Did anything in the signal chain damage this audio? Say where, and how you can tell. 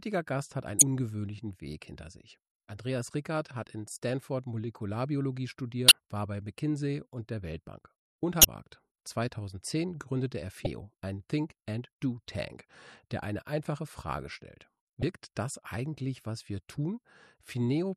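Yes. Damaged data in a compressed stream appears at the codec and storage stage, as five brief bursts at 0.79–0.82, 5.88–5.93, 8.41–8.45, 10.63–10.67 and 15.00–15.03 s, each lasting roughly 30 to 50 ms and heard as a short chirp, squawk, click or hole in the sound. Corrupted bytes make the decoder misread those frames and lose sync until it finds the next valid frame header.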